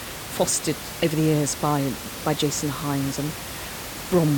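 The recording is speech, and nothing is technically wrong with it, though background noise from the room sits about 11 dB below the voice.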